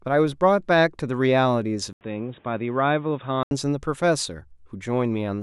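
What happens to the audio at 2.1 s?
The recording's input was likely switched to a poorer device at 1.93 s and stayed there until 3.51 s, so 2.1 s falls inside that stretch. A brief 80 ms silence marks the switch. After it, the speech has nothing above 3.8 kHz, which makes it sound dull and boxy. It also drops a few decibels in level and carries a new, faint background noise of its own. The fuller sound returns at 3.51 s.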